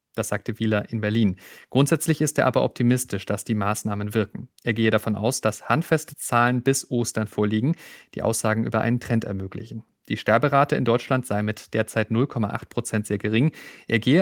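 No technical faults can be heard anywhere in the recording. The speech runs continuously with no dropouts, clicks, distortion or level jumps at any point.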